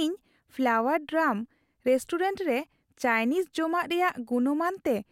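No technical faults can be heard anywhere in this recording.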